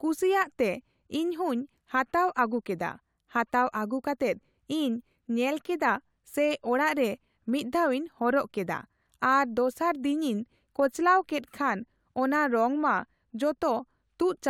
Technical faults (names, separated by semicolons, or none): none